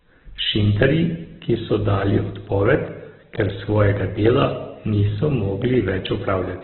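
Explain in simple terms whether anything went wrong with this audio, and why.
Something did go wrong, and it lasts the whole recording. The speech sounds thin and boxed-in, as if heard down an old phone line. Nothing reaches above about 4.1 kHz, so the crisp, airy part of the sound is gone. The voice also has a rough, grainy, noisy texture. The likely cause is heavy Opus compression. When squeezed this hard, it keeps only a narrow band of sound and fills the gaps with noise.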